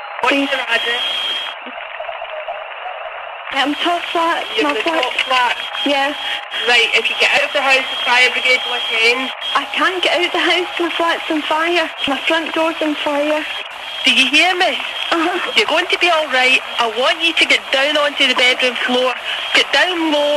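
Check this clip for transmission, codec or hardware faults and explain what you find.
One codec fault recurs three times: damaged data in a compressed stream, at 3.50 to 3.54 s, 7.34 to 7.38 s and 15.65 to 15.68 s. Corrupted bytes made the decoder misread frames and lose sync until it found the next header. Each time the audio breaks for about 30 ms with a brief glitch or gap.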